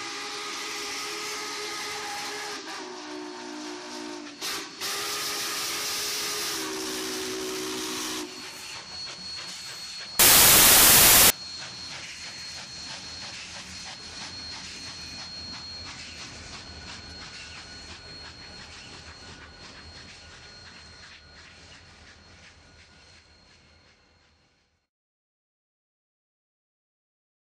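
From 10.19 to 11.30 s, samples built from the wrong bytes turn the audio into loud, harsh broadband noise, with a flat broadband spectrogram band.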